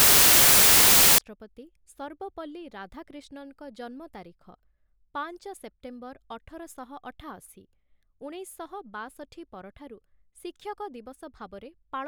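From 0 to 1.18 s the speech is buried under loud white noise. These are samples built from the wrong bytes, with low bits read as high.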